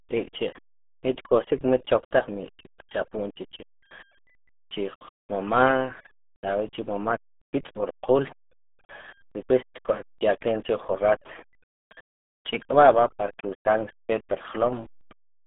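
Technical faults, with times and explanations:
Throughout: RealAudio 14.4 codec. The speech is muffled and gargly with nothing above 3.6 kHz, which fits a heavily squeezed 8 kbit/s dial-up codec, unlike a clean telephone band-limit.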